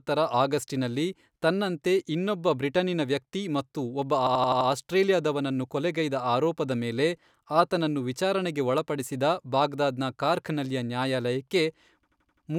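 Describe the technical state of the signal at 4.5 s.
At 4.5 s the speech is caught in a system hang loop. It runs from 4.27 to 4.69 s. The computer or its driver stalled while the sound hardware kept replaying its ring buffer. One piece of about 85 ms repeats exactly five times, at 11.7 Hz. That length fits a 4096-sample buffer. The result is a hard machine-gun stutter rather than a buzz. Little or no audio seems to be lost.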